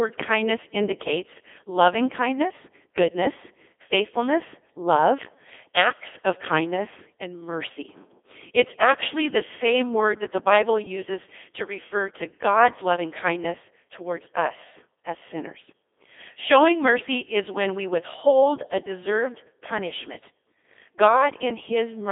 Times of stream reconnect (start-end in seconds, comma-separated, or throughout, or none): none